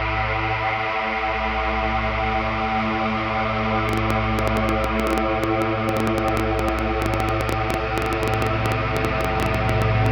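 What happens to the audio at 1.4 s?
Nothing goes wrong at 1.4 s; the audio plays through that moment intact, with no dropout, click, distortion or other fault.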